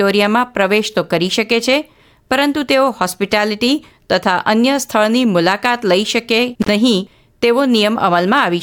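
At 6.62 s the speech drops out for about 56 ms, ending by 6.69 s, from an intermittent contact: a loose plug or cable briefly opening the line. Crackle marks both edges, with faint hiss in the gap. The waveform collapses to near-flat, bracketed by spiky transients; the spectrogram shows a dark notch edged by broadband vertical streaks.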